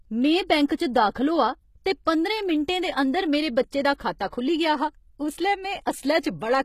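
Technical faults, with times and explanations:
Throughout: HE-AAC compression. The audio was likely coded with HE-AAC at a low bitrate, around 20 kbps. Only the lower spectrum was coded properly, and the treble was rebuilt by copying lower bands upward under a coarse envelope. Because that upper band is a reconstruction, its harmonics do not align with those below the crossover, so the speech has a plainly audible gritty, metallic edge on sibilants. Nothing is present above 14.9 kHz.
0.66–0.70 s and 3.95–4.00 s: pre-echo. In each case a sharp attack fell late in a transform block, and the codec spread its quantisation noise evenly across the whole block, including the quiet stretch before the onset. The noise was sized for the loud attack, so it is exposed in that gap, about 39 ms long the first time and 53 ms the second. Each onset is preceded by a brief hiss and sounds softened and smeared.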